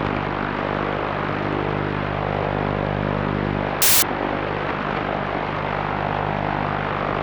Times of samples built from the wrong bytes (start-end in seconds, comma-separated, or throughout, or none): 3.82-4.02